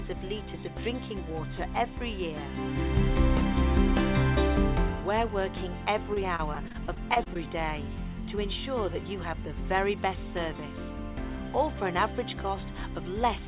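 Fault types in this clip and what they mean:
Repeated packet loss (robotic sound): from 6.14 to 7.45 s, the audio breaks into a rapid run of roughly ten brief dropouts, the longest about 26 ms. Each is bridged by extending the preceding sound, so about a sixth of that stretch is filler, giving a choppy texture with pieces missing.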